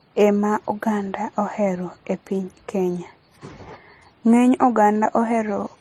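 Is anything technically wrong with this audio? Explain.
Yes. Throughout the speech there is transcoding between lossy codecs. The sound fits a likely chain of low-rate MP3, around 37 kbit/s, followed by HE-AAC at about 40 kbit/s. The second encoder spends its bits copying the first one's damage and adds its own, so smeared, swirly MP3 artefacts and HE-AAC's metallic treble are heard together. A spectrogram shows nothing above 15 kHz, with patchy, blocky energy in the upper bands.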